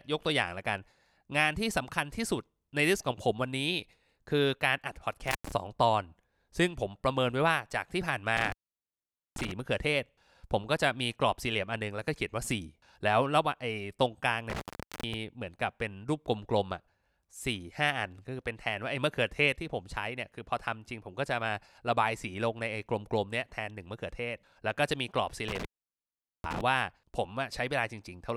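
Intermittent contact cuts the speech at 5.28, 8.37, 14.50 and 25.48 s. A loose connection opens for about 0.1, 0.84, 0.43 and 0.79 s. Each dropout has crackle at its edges.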